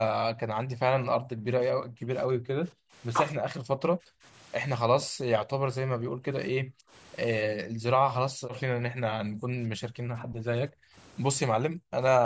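Speech, with speech suppressed in double talk at 0.0–2.94, 3.38–4.24, 4.82–6.94, 7.46–10.97 and 11.47–12.25 s. The voice dips or breaks up, falling by around 40 dB, likely because an echo canceller muted it during overlapping talk. The call microphone processing leaves nothing above 8 kHz.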